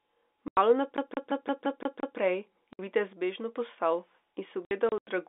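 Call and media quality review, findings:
Packet loss filled with silence, receiver jitter buffer or network path. Hard silent holes at 0.48–0.57 s (90 ms) and 2.73–2.79 s (60 ms), then 4.65–5.07 s with 180 ms missing in gaps up to 90 ms. Steps fit 30 ms packets.

CD stuck on one turn, playback source skipping back on the same scratch. 0.97–2.17 s: one 173 ms slice repeats 7 times, short mute at each jump back. Fast, even stutter replacing the forward flow of the speech.

Sudden gain jump, likely an unramped digital gain change in the processing chain. 3.13–3.56 s: speech and background noise drop together by about 4 dB from one sample to the next, then return. Abrupt level step, no fade.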